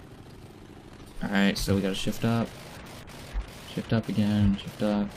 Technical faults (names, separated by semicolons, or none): none